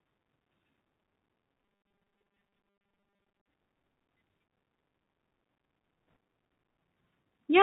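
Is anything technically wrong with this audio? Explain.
Yes. Throughout the clip, the speech passes through a Bluetooth CVSD headset codec. It encodes the signal one bit at a time, at 64 kbps, as up-or-down steps of adaptive size and discards everything above 4 kHz. The result is plainly audible: muffled narrowband speech, scratchy s sounds, distortion on loud high content, and a granular hiss underneath.

From 1.65 to 3.48 s there is robotic sound from repeated short buffers. Its likely cause is new audio arriving too slowly, so playback loops the last chunk in place of most of the real signal. The sound becomes a rigid metallic buzz at 200 Hz, which fits a buffer about 5 ms long.

At 6.16 s, bit errors on the Bluetooth voice link flip bits at a rate of roughly one or two percent. Because each CVSD bit carries only a small step and errors fade quickly, this brief burst is heard as a rushing, crackly noise rather than a loud click.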